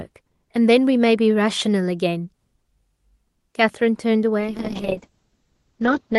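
Call bitrate drop, 4.41 s to the end at 6.18 s: starved of bits, the encoder codes coarsely, roughening the sound and lowering its top from 12 kHz to 8 kHz.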